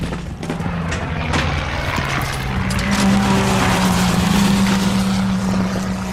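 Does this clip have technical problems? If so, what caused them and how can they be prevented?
Yes. Weak DAB reception let bit errors slip past error correction into the MP2 audio, corrupting samples and scale factors so single sub-bands jump in level. The result is DAB burbling, from 3.42 to 4.38 s and again, more densely, from 5.42 to 5.92 s. A better antenna position or a stronger signal would prevent it.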